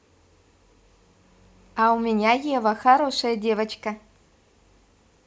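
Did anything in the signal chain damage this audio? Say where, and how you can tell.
No, no damage found.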